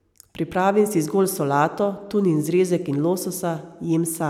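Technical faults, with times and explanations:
No technical faults can be heard anywhere in the speech. There is nothing to list with a time or an explanation.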